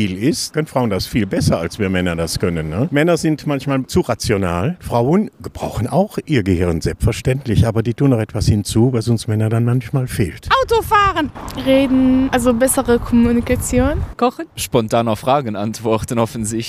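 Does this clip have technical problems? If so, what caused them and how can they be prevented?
No, nothing in this audio stood out as a technical problem on listening.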